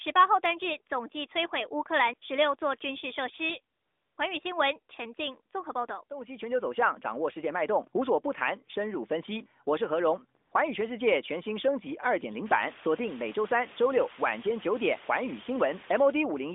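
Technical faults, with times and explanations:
0.46 s and 15.53 s, dropped samples: each is a single sharp click, a thin vertical line across the spectrum. The likely cause is a couple of missing samples, a tiny fraction of a millisecond, making the waveform jump abruptly to a later value.
3.76 to 4.18 s and 10.40 to 10.52 s, AMR comfort noise: the real background gives way to a smooth, steady synthetic hiss that switches in and out. For 420 ms and then 120 ms the phone judged the talker silent, sent no speech frames, and the receiver generated filler noise.
12.46 to 16.11 s, low bit depth with dither: a constant, even hiss sits under the speech, about 15 dB below the signal, without any harsh distortion. The audio carries only 6 bits, and dither added before rounding turns the coarse quantisation error into steady white noise.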